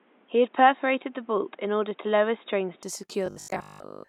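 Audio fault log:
0.00–2.83 s, input switched to a poorer device: the speech is band-limited, with a quiet added noise about 35 dB down and a level about 5 dB different. It then clears up abruptly with no gap, likely a microphone change rather than filtering, which would leave noise and level unchanged.
3.26–4.08 s, robotic sound from repeated short buffers: the speech turns into a rigid metallic buzz fixed at 50 Hz while still loosely tracking the syllables. Most of the audio is skipped and a repeated 20 ms segment likely fills the gaps. This differs from codec warble, whose artefacts carry no steady pitch.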